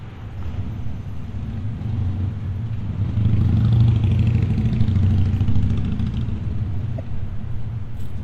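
Damaged data in a compressed stream appears from 6.98 to 7.00 s, a brief burst of about 20 ms. Here the encoded bitstream itself was corrupted, so the decoder could not read the affected frames correctly. It either decoded garbage or discarded them, lost its place, and had to hunt for the next valid frame header before normal output resumed. The result is a short, harsh chirp or blip that breaks abruptly through the sound.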